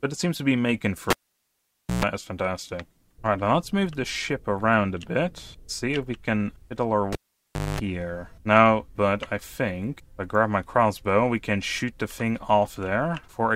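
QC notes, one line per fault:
1.10–2.05 s, cable pulled and plugged in: a pop marks the disconnect, then about 0.89 s of near silence, then a 132 ms burst of 60 Hz mains buzz as the plug tip makes contact before the sleeve grounds, then a second pop. The waveform shows spikes bracketing a flat gap, and the spectrogram shows harmonic stripes at 60 Hz multiples.
7.13–7.80 s, cable pulled and plugged in: a pop, then about 0.63 s of near silence, then a 227 ms stretch of 50 Hz buzz while only the tip touches, then a pop as the sound returns. The waveform shows the same spike, gap and spike pattern, and the spectrogram shows banded 50 Hz harmonics.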